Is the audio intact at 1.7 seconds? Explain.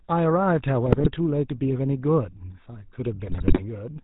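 No. The whole clip has passed through the GSM full-rate codec, a vocal-tract model driven by sparse regular pulses at a rate that fits about 13 kbps. At 1.7 s the speech is plainly damaged: band-limited below 4 kHz, with a buzzy, gravelly roughness.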